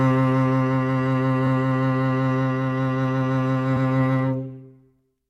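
Repeated frames: compressed frames of this music were decoded twice, replaying a short slice. From 1.46 to 1.48 s a 23 ms block, fitting one frame, recurs as a brief stutter. From 3.76 to 3.87 s a 116 ms block, fitting five frames, stutters audibly. Each repeat lengthens the clip by its duration.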